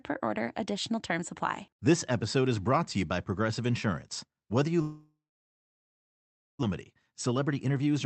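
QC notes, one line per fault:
4.81–6.65 s, long network dropout: audio stops arriving for nearly two seconds, likely a network outage. The receiver stretches the last sound into a fading buzz or hiss that soon gives way to about 1.4 s of silence, then playback resumes without the missing material, roughly a second of it gone. The jump in delay that comes with this, around 0.7 s, leaves the receiver holding extra audio when packets flood back in.
6.94–8.05 s, jitter buffer speed-up: with that surplus sitting in the buffer, the receiver trims it back by cutting out tiny slices a pitch period or so long, over and over. Around a tenth of a second is dropped in total, so the speech runs about 9% fast while keeping its pitch, and the closing stretch sounds rushed. The Opus call path beneath it carries its usual coding noise and 8 kHz bandwidth limit.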